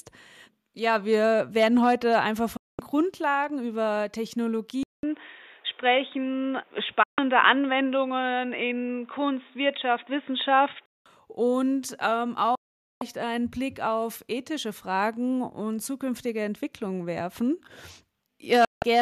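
The audio has four digital broadcast dropouts, at 2.57–2.79 s, 7.03–7.19 s, 12.55–13.02 s and 18.65–18.83 s. In each, the sound is muted with a fast fade of about 3 ms and is gone for roughly 0.14 to 0.46 s. These gaps are typical of a receiver muting when frames go missing or fail their checks. From 4.83 s to 11.06 s, after a 200 ms silence, the sound turns dull, with nothing above 3.8 kHz, a shift in level of a few decibels and a fresh low hiss. This points to the input likely being switched to a poorer device.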